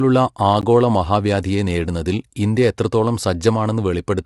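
Throughout the speech, voices sound rough and grainy with plainly audible codec damage and nothing above 11.6 kHz, likely low-delay AAC compression (AAC-ELD), consistent with about 32 kbps. At 0.61 s a block of digital silence about 15 ms long drops the signal abruptly to silence and back, leaving a tick.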